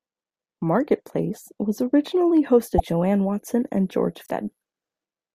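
Broken MP3 bit reservoir at 2.77–2.80 s and 4.24–4.30 s: brief garbled jumps, likely from cut frames decoding against another frame's reservoir bytes, spanning roughly one to three 24 ms frames.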